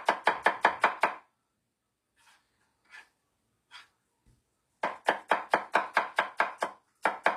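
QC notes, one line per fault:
Throughout, HE-AAC compression: the treble sounds bright but gritty and metallic, likely from spectral band replication rebuilding the top from copied lower bands at a low bitrate, around 24 kbps. A spectrogram shows repeated, smeared blocks above a sharp crossover, with harmonics misaligned.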